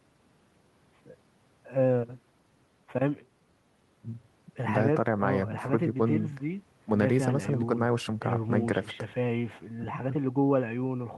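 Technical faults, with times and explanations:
No technical faults can be heard in this speech.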